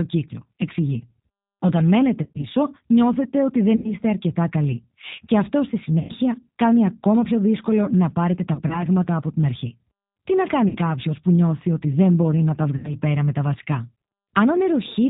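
Throughout, the G.729 codec at 8 kbit/s rebuilds the speech from a filter and sparse pulses. It sounds rough and synthetic, and a spectrogram shows nothing above 4 kHz.

VoIP packet loss concealed by the speech codec occurs at 2.23–2.45 s, 3.76–3.94 s, 5.99–6.12 s, 8.54–8.83 s, 10.69–10.77 s and 12.76–12.95 s, each time losing 60 to 100 ms of audio. The decoder stretches its last pitch and filter into a fading buzzy tone or coloured noise, which shows as a sagging waveform envelope.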